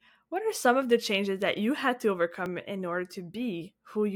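At 2.46 s the speech jumps forward. Roughly 10 ms of sound is missing, with no gap of silence. This is likely a dropped buffer (overrun). The samples were overwritten before being read, so the two sides join directly.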